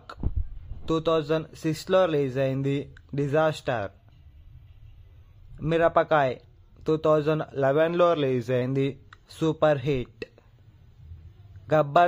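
At 3.79 s the audio suddenly sags about 5.4% slow and drops nearly a semitone (around 97 cents) until 5.35 s, then snaps back, and it happens again from 7.63 to 8.62 s. That's likely a drift correction step, where clock-matching software briefly cut the playback rate to rebalance its buffer.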